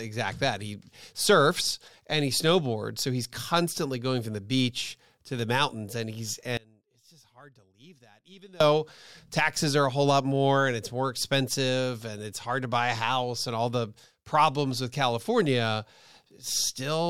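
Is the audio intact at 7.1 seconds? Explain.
No. At 7.1 seconds the speech sits inside an audio dropout to a faint residue that runs from 6.57 to 8.60 s, about 2.03 s. The wanted signal most likely broke off upstream while the path after the break stayed live, so the gap is not silence. Only a faint leak of the sound remains, roughly 30 dB below its normal level. Both edges are abrupt cuts, not a natural pause or fade.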